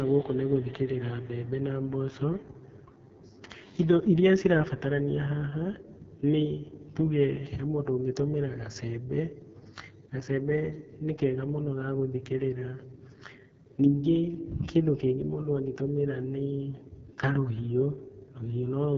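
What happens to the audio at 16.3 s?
At 16.3 s, as throughout, the speech carries AMR wideband (HD Voice) codec damage. It sounds rough and raspy, with nothing above 7.6 kHz. This fits the lowest 6.6 kbit/s mode.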